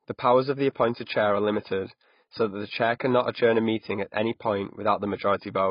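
AAC compression affects this speech clip throughout. Nothing sounds above 5.1 kHz and the heavy damage leaves the sound dull and smeared. The likely cause is AAC-LC at a rate that fits about 16 kbps, lowering the cut-off and coarsely quantising what remains.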